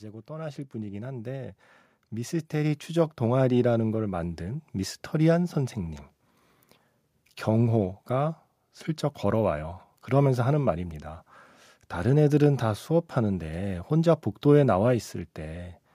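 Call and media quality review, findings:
Automatic gain rising, 0.05 to 5.84 s: voice and background swell up together, about 13 dB overall. Capture-side AGC judged the input too quiet and ramped its gain slowly, so the noise floor climbs right along with the speech.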